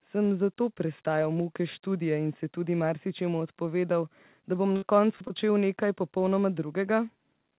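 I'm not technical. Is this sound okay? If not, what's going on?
No. From 4.76 to 5.32 s the speech turns choppy and robotic. This is repeated packet loss: four small chunks of sound went missing, the longest about 59 ms, and each hole was patched by stretching the previous sound. Through this phone-style connection, nothing above 4 kHz comes through.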